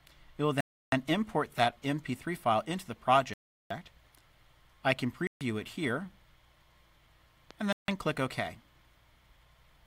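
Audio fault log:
0.61–0.92 s, 3.34–3.71 s, 5.27–5.41 s, 7.73–7.88 s Bluetooth stall: the sound drops to dead silence for 317, 369, 138 and 156 ms, then resumes, likely because interference held up the wireless packets and the buffer ran empty. These show as flat-line gaps in the waveform and blank vertical bands on a spectrogram.
7.51–7.53 s loud pop: a single sharp pop rises a few dB above the sound, which continues underneath, likely from a sudden voltage pulse such as static or a switching glitch. It appears as a narrow spike in the waveform and a thin full-height broadband stripe on a spectrogram.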